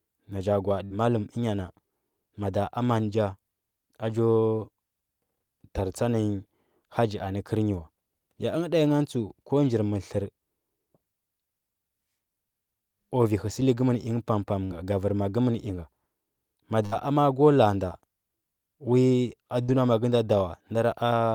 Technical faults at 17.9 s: none

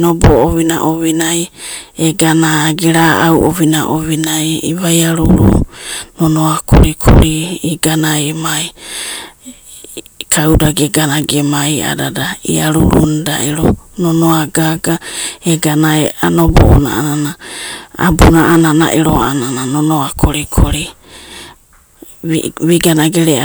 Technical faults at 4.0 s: hard clipping

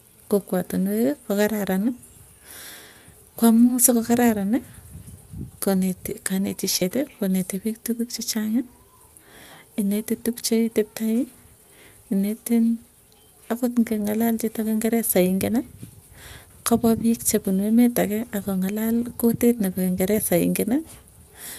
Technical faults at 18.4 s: lost LE Audio frames

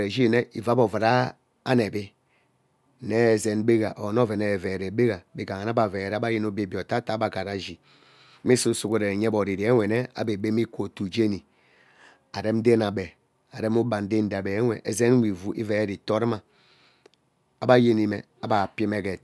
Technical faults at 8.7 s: resampler restarted on every block

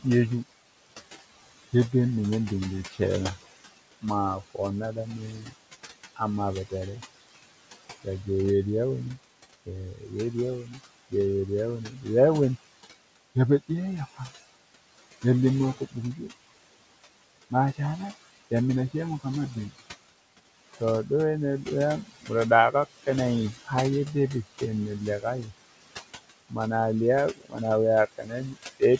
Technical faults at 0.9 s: noise suppressor artifacts

